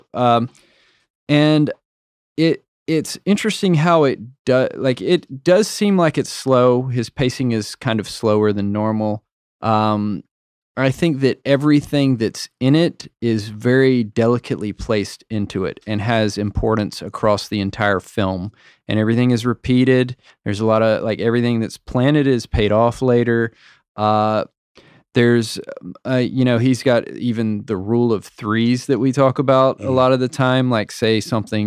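No technical faults can be heard at any point in the speech, so there is nothing to place in time order.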